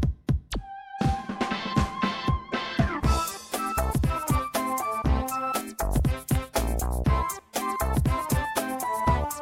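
Between 6.35 and 6.59 s, two sharp pops in quick succession punch through, peaking around 10 dB above the surrounding audio, which carries on beneath them. This loud pop is likely a sudden voltage step from a plug, switch or static discharge, shaped by the following circuitry.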